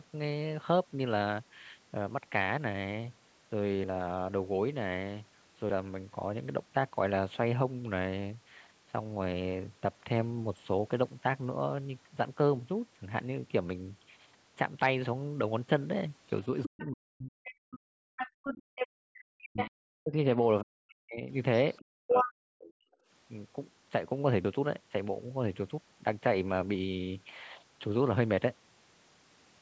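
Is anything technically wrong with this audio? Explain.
Yes. Between about 16.6 and 24.5 seconds the speech has several echo-canceller problems and one skip.

Other side's voice leaking through: a second voice appears at 16.63–16.88, 17.45–18.87, 19.57–19.68 and 21.76–22.29 s. It is likely loudspeaker playback that the echo canceller left in the microphone signal. It sits about 10 dB and then about 5 dB below the talker, and at 21.76 s it rises to about 5 dB above.

Speech suppressed in double talk: the talker's level collapses by roughly 40 dB at its deepest over 16.66–18.17, 19.06–21.29 and 21.87–22.80 s. This likely happened because the canceller could not tell near speech from echo while both sides spoke, so it attenuated everything.

Background gated by the echo canceller: the room sound drops by about 40 dB at 18.62–18.75 s, for roughly 150 ms, and then returns. The canceller clamped the microphone hard while the loudspeaker was active, leaving a brief hole in the ambience.

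Dropped buffer (overrun): at 24.45 s the audio jumps ahead, missing around 150 ms. This is likely an overrun: the samples were overwritten before being read, and the surrounding audio was spliced together with no silence in between. The high-pass filter from the call microphone processing, which removes the lowest bass, applies throughout.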